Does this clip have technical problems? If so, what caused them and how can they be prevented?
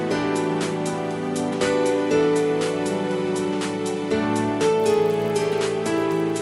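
Yes. From 4.76 s to the end, the resampler restarted on every block, likely converting each 20 ms block in isolation, which fits a 24 kHz to 48 kHz upsample. The result is a 50 Hz buzz of edge errors under the sound. Carry the resampler's filter state across blocks so it never restarts mid-stream.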